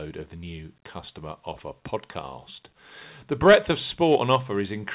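Nothing goes wrong here; the speech has just come over a call line where everything stops at 4 kHz, which fits an ordinary G.711 mu-law phone codec doing its normal job.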